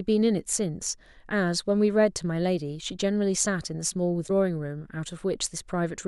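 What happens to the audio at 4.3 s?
At 4.27 to 4.30 s the speech breaks into a garbled blip of about one 26.1 ms frame, likely a broken MP3 bit reservoir: the frame after a cut reads stale bytes, unlike a clean dropout.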